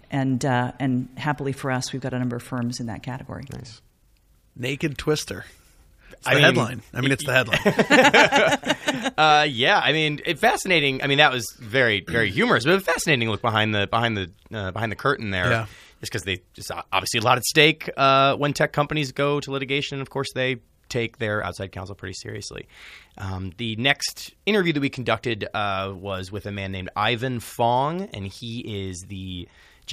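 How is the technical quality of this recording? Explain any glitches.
No audible technical faults here.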